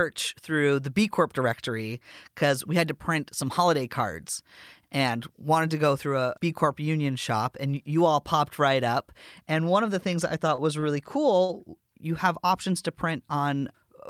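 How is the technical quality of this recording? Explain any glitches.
The speech has three brief glitches close together. All three are short stalls from a late packet. They come at 10.55 to 10.60 s, 10.80 to 10.84 s and 11.44 to 11.51 s. Each time a packet arrived late and the jitter buffer emptied. The receiver held the last sound for 24, 26 and 43 ms, then resumed. Nothing is lost. A sound simply lingers, with a faint buzz or dip.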